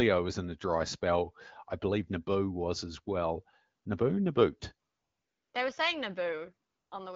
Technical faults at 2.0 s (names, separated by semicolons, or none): none